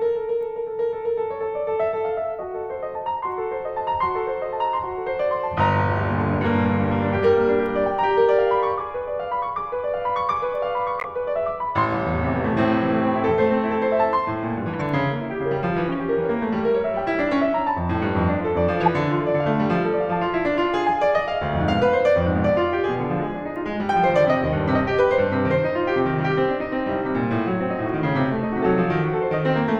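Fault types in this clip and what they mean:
corrupt frame decoded: Damaged bits inside compressed frames reached the decoder, which played those frames instead of discarding them, so misread gains and codes put energy at the wrong frequencies. In this music the result is four brief bursts at 11.00–11.06 s, 14.73–14.81 s, 15.93 s and 18.81–18.88 s, each lasting only a few frames' worth of time. The burst near 18.8 s is the loudest, at about -10 dBFS, and the one at 15.93 s is only a faint blip.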